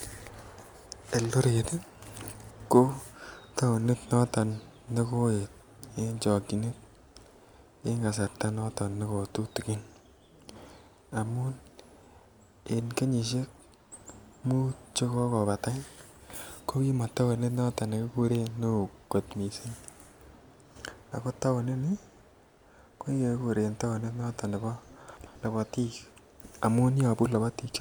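A speech clip with chunks out of order at 2.51 s and 25.17 s: two chunks of about 93 ms swap places, each arriving one chunk late, giving a jumbled blip. Unlike a dropout, nothing goes missing; the sound is merely reordered.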